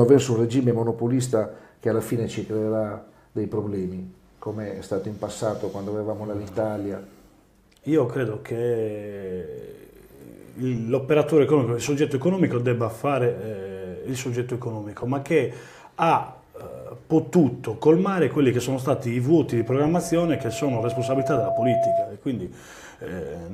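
At 19.51 s a loudspeaker feedback squeal kicks in: the mic is hearing its own speaker, and around 673 Hz the loop gain tips past one. The tone swells over a couple of seconds, ends up a few dB above everything else, and cuts at 22.15 s.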